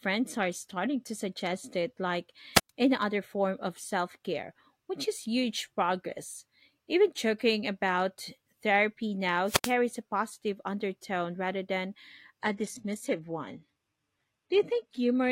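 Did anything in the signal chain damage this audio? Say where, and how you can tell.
Yes. Wireless microphone squelch dropouts at 2.54 s, after "to suggest it like", and 9.45 s, after "joking about therapy". Hiss rises, then near-silence for 118 ms and 80 ms. A fading radio signal tripped the receiver's mute.

From 12.42 s, after "positive undertone rather than", the network delivered an adaptive stream at a lower bitrate. Treble stops near 12.3 kHz, without a gap. This fits a switch from 96 kbit/s AAC to 16 kbit/s HE-AAC.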